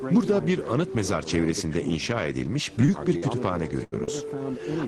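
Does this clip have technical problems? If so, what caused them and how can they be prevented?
Yes. There are three short concealed packet losses, at 2.85 to 2.90 s, 3.18 to 3.24 s and 4.04 to 4.09 s. Each time, audio failed to reach the decoder in time. About 20 ms went missing in the first case and about 40 ms in the other two. The receiver patched each hole by extending the preceding sound, then blended back into the real signal. Each patch is heard as a brief smear or wobble. A larger jitter buffer and forward error correction would help prevent this.

There is also a burst of packet loss from 3.84 to 3.94 s. Here roughly 80 ms in a row were lost or arrived too late. The receiver carried the last sound forward and faded it as the gap lengthened. The result is a held buzz or dying hiss. Playback then picks up further along, and the audio in between is gone. Redundant packet coding and a more stable network path would prevent it.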